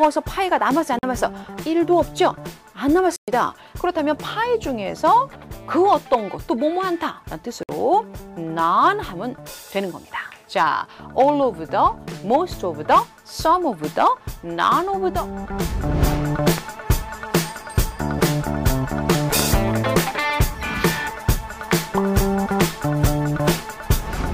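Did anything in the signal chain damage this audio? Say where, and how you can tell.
Yes, two kinds of damage, both at the playback end. The first is Bluetooth dropout: the sound cuts to silence at 0.99 to 1.03 s, 3.16 to 3.28 s and 7.63 to 7.69 s, holes of about 44, 116 and 58 ms. When it comes back it has moved on rather than picking up where it stopped, which is the signature of packets missing their slot on the wireless link and being thrown away, likely a handful each time, with the longest gap losing the most.

The second is a loud pop, one each at 16.58 to 16.60 s and 19.39 to 19.41 s, jumping about 15 dB above the surrounding level. Each is a single sharp burst sitting on top of the audio, and the sound keeps going underneath it, so nothing was lost. That points to a sudden voltage step being added to the signal somewhere in the analogue wiring or the output driver, likely a connector, switch, static discharge or driver glitch, which the circuitry downstream then shapes into that short crack.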